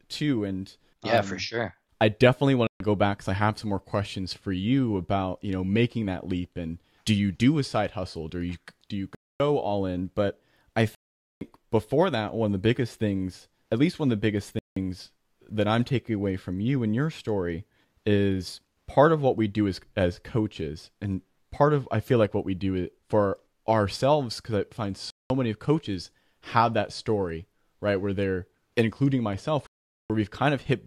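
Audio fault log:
2.67–2.80 s, 9.15–9.40 s, 10.95–11.41 s, 14.59–14.77 s, 25.10–25.30 s, 29.67–30.10 s: Bluetooth stall. The speech drops to full silence six times, for 133, 251, 461, 176, 197 and 432 ms. Each time it resumes abruptly. The gaps are irregular in length and spacing. The likely cause is radio interference delaying packets on the wireless link. The headphones' buffer empties, so playback halts until the retransmitted audio arrives.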